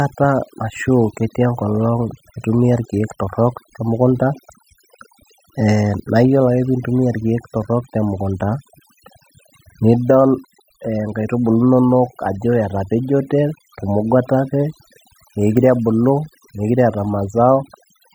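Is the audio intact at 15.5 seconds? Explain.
No. At 15.5 seconds the speech is affected by overdone noise removal, which runs through the whole clip. A noise reduction stage was pushed far too hard, so any frequency band sitting close to its noise estimate gets pulled right down or shut off, and the softer parts of the speech are cut away along with the noise. The background collapses into near silence sprinkled with twinkling specks.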